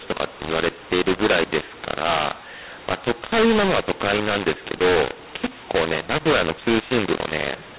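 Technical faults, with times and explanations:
throughout: mu-law and A-law mixed up. Mu-law telephone speech is decoded as A-law, scrambling levels into harsh distortion. Unlike clipping, the pauses also fill with noise.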